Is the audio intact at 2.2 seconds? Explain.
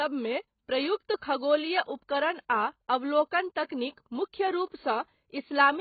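No, 2.2 seconds sits inside AAC compression damage that runs through the whole clip. Nothing gets above 4.6 kHz, and the speech sounds dull, smeared and fizzy. That's likely AAC-LC starved of bits, which points to something like 16 kbps, so the encoder cut the top band.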